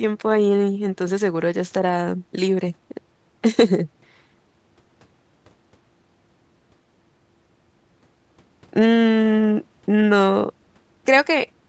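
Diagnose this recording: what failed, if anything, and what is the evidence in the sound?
Nothing failed; no fault is audible anywhere here.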